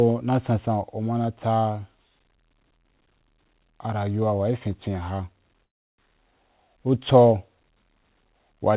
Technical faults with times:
5.64-6.01 call audio freeze

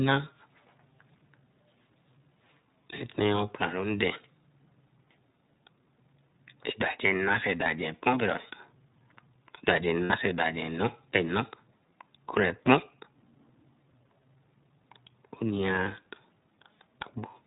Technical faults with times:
0.00-17.46 iLBC codec
7.63-7.67 lost iLBC frames
10.04-10.12 lost iLBC frames
15.84-15.87 lost iLBC frames

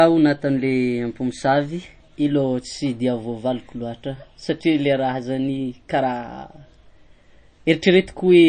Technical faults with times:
0.00-8.49 MP3 compression

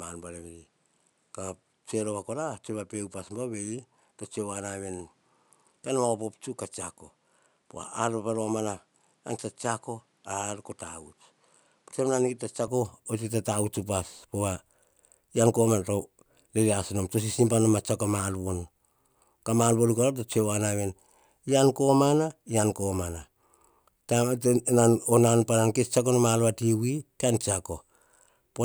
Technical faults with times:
0.00-12.68 input switched to a poorer device

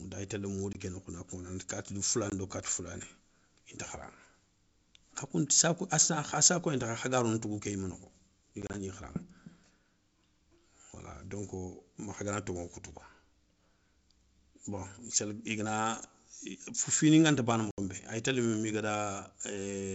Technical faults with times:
0.73-0.76 packet loss on an ADPCM call
2.30-2.33 packet loss on an ADPCM call
8.62-8.75 packet loss on an ADPCM call
17.71-17.79 packet loss on an ADPCM call

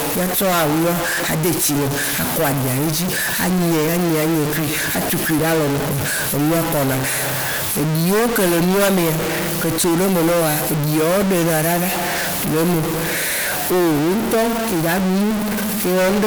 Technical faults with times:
0.00-16.27 stuck bit

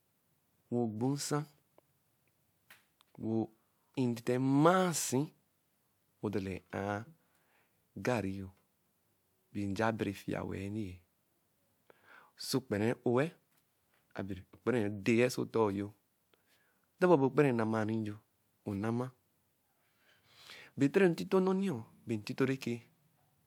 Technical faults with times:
none

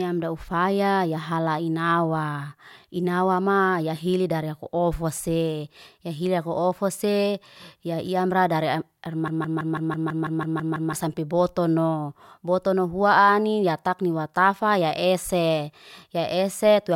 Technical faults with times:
9.28-10.94 broken-record loop

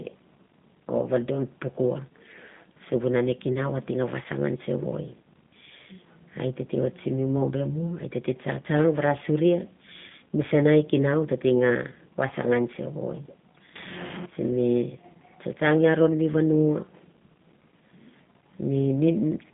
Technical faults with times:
0.00-19.53 G.729 codec
10.08-10.10 VoIP packet loss concealed by the speech codec

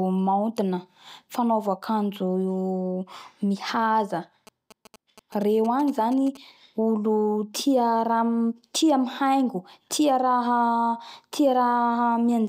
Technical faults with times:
4.47-6.37 GSM signalling bursts

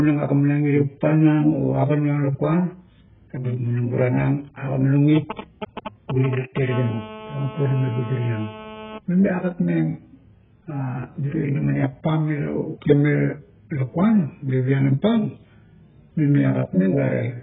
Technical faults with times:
0.00-17.43 AAC compression

